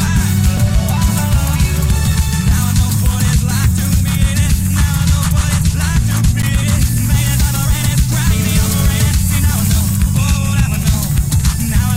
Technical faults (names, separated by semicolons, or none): underrun with held sample; GSM phone buzz